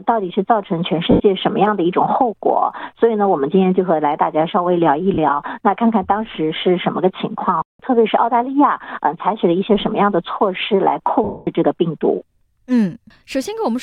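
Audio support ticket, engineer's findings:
Noisy, smeared dropouts at 1.11–1.20 s, 5.14–5.18 s and 11.24–11.47 s, the last (230 ms) fading toward silence. Lost LE Audio frames: the LC3 decoder concealed gaps by repeating the last spectrum with random signs. Light lossy compression is present.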